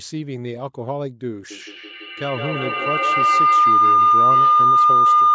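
Feedback howl, 1.5 s to end: a loudspeaker-to-microphone loop gains every pass, swelling near 1 kHz, repeating roughly every 150 ms, about 12 dB above speech.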